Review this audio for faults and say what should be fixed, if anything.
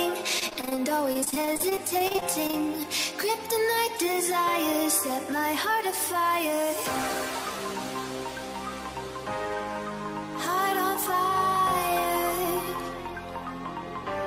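Repeated packet loss (robotic sound) runs from 0.39 to 2.63 s. Over this stretch the stream drops out again and again, in a couple of dozen short holes, none longer than about 26 ms. Each hole is papered over by extending the last received sound, so roughly a fifth of that span is synthetic fill, close to half a second in total. The rapid alternation of real and repeated fragments gives the choppy texture. To prevent it, stabilise the network path or enlarge the jitter buffer, and add forward error correction so isolated losses can be rebuilt instead of concealed.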